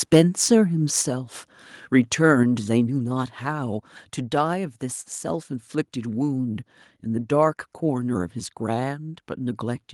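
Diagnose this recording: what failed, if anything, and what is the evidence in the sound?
The microphone input gain was likely set too high, overloading the converter. From 0.13 to 0.21 s the loudest speech peaks run about 4 dB past the converter's limit and are flattened, with several percent of samples clipped, giving a harsh, crackly edge to the loudest syllables.

Call processing then lowered the device's input volume, likely an automatic gain response to that microphone overload. At 1.02 s and again at 2.43 s, speech and background drop together by about 4 dB in a single abrupt step, not a gradual fade.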